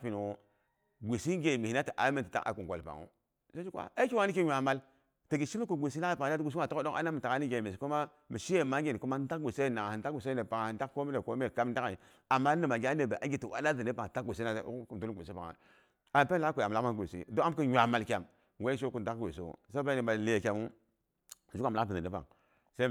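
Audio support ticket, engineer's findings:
Listened through the speech recording; nothing stood out, no action needed.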